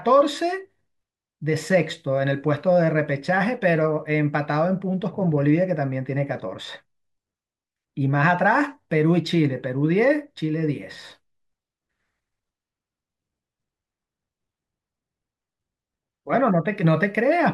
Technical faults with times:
none

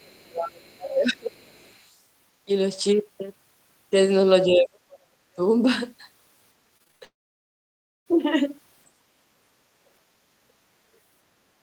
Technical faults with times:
0.00-1.55 speech suppressed in double talk
1.47-2.00 other side's voice leaking through
4.47-5.41 speech suppressed in double talk
6.77-7.03 repeated packet loss (robotic sound)
7.05-8.08 long network dropout
8.95-9.31 background gated by the echo canceller

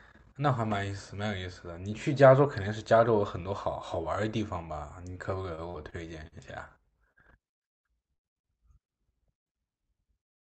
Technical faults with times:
5.55-6.35 repeated packet loss (robotic sound)
7.12-7.19 short concealed packet loss
8.13-8.21 burst of packet loss

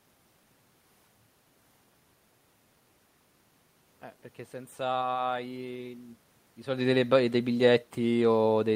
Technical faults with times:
none

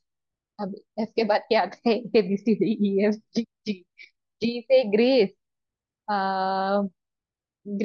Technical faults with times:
none

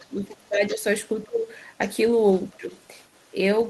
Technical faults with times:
0.00-0.08 other side's voice leaking through
0.00-0.83 speech suppressed in double talk
0.46-0.75 other side's voice leaking through
1.18-1.78 other side's voice leaking through
1.24-1.46 speech suppressed in double talk
2.17-3.69 other side's voice leaking through
2.50-2.73 speech suppressed in double talk

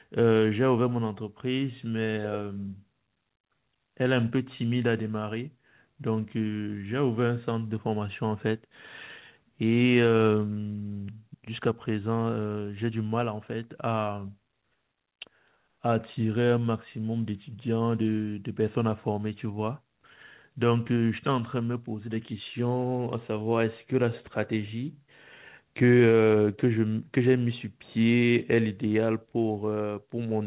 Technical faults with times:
none

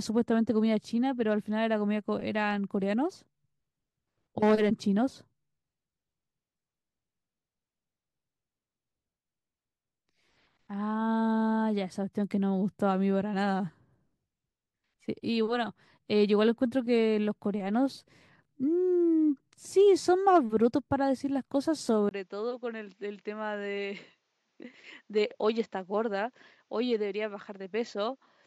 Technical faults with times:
22.09-28.47 input switched to a poorer device

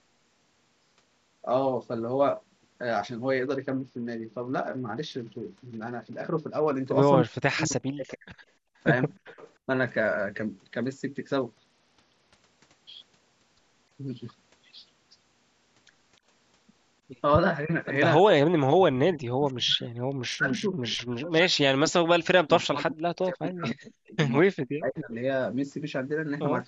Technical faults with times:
3.45-6.75 Bluetooth SBC bit pool drop
7.24-8.35 speech suppressed in double talk
8.08-8.14 echo leak
8.63-8.76 background gated by the echo canceller
9.26-9.50 echo leak
11.53-12.36 Bluetooth SBC bit pool drop
17.64-25.12 speech suppressed in double talk
19.48-19.53 echo leak
20.01-21.39 Bluetooth SBC bit pool drop
24.95-25.15 echo leak

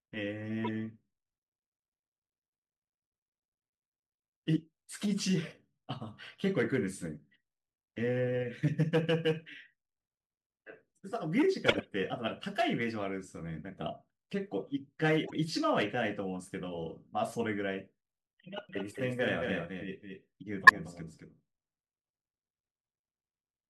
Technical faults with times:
0.64-0.69 corrupt frame decoded
11.66-11.86 corrupt frame decoded
15.25-15.33 corrupt frame decoded
18.69-23.70 doubled audio track
18.92-18.96 corrupt frame decoded
20.62-20.70 corrupt frame decoded

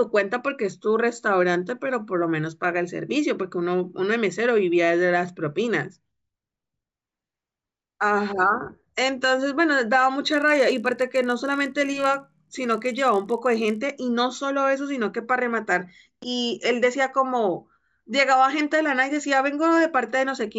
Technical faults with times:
10.30-13.78 resampler restarted on every block

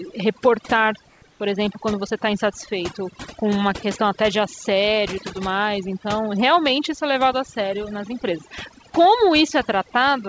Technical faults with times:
0.00-10.29 overdone noise removal
1.10-1.40 comfort noise in place of the background

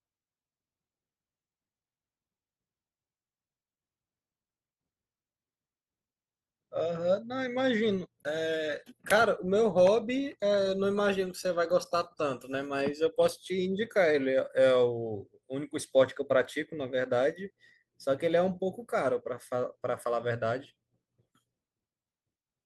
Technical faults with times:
none

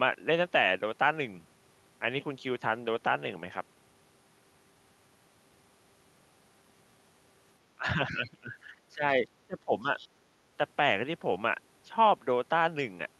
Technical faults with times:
7.76-9.03 speech suppressed in double talk
8.13-8.18 other side's voice leaking through
9.47-9.87 speech suppressed in double talk
9.99-10.08 other side's voice leaking through
10.14-10.20 speech suppressed in double talk

